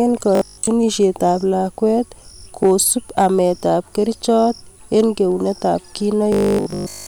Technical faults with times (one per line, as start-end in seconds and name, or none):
0.35-0.67 robotic sound from repeated short buffers
2.63-3.39 hard clipping
4.97-5.01 hard clipping
6.32-7.06 robotic sound from repeated short buffers